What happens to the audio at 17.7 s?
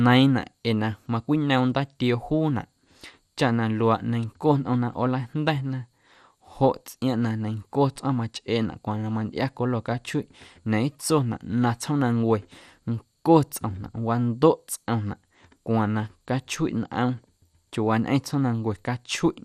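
At 17.7 s the speech, like the whole clip, sounds dull and gurgling, likely from MP2 compression near 80 kbps starving its sub-bands; a spectrogram shows upper bands blinking off in blocks.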